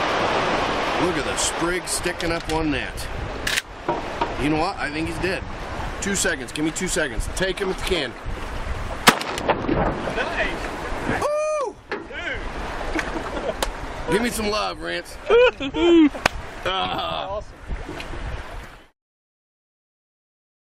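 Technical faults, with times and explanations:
5.83, 9.72, 14.13, 16.84–16.90 and 18.63 s, corrupt frame decoded: damaged compressed frames played anyway, with misread codes putting energy at the wrong frequencies. Each sounds like a short chirp or noise blip lasting one to three frames, peaking at roughly -30 to -10 dBFS, loudest near 16.9 s.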